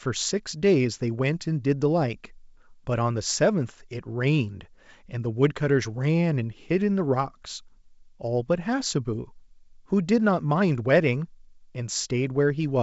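Nothing's wrong here: it's speech carried over G.722 wideband telephone coding at 64 kbit/s, so the top end stops at about 7.7 kHz as that path is built to do, and there's no fault to point to.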